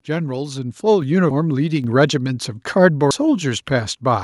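At 1.02 s the microphone volume gets stepped up. The call software decides the input's too quiet and bumps the device level in one jump of about 5 dB, so the voice and the room noise behind it get louder together.

At 3.11 s there's a skip, with roughly a fifth of a second of speech gone and the two sides butted straight together with no gap. That's likely audio missing between chunks, lost while the recorder closes one 2-second chunk and starts the next.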